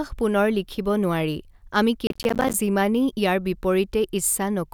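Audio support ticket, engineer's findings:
Processor overload crackle, 2.07 to 2.54 s, just after "লিখিব নোৱাৰি আমি". Gritty tearing over the speech for about half a second. Audio processing missing its deadlines repeatedly. Each missed buffer drops to silence with hard edges. Crackle spacing fits short buffers of roughly 10 ms, about twenty missed across the stretch. Clears once the load eases.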